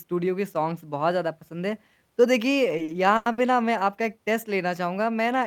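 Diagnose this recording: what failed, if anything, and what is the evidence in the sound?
Repeated packet loss (robotic sound) in the network path, 2.77 to 3.41 s: four gaps, the longest 90 ms, were concealed by extending prior speech for 200 ms, with 60 ms lost outright. A spectrogram shows frozen, flat harmonic bands with abrupt edges; the waveform shows looped cycles.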